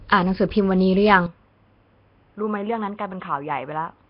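From the start, the speech carries heavy codec damage, likely from Nellymoser compression. This codec works on short blocks with a fixed, small bit budget. Weak bands get no bits and are filled with noise. The result is a rough, hissy halo and a smeared, underwater quality. Nothing is left above 5.3 kHz. The coarse texture fits a rate of about 22 kbps. The damage runs through the whole clip.

At 1.26 s the input is likely switched to a poorer device. There is no gap at the switch. The sound turns duller and boxier at once, because the band now stops at 3.8 kHz. The level drops by around 10 dB. A new background noise appears, roughly 35 dB below the speech. The new device brings its own tone as well. This narrower, quieter sound lasts to the end of the clip.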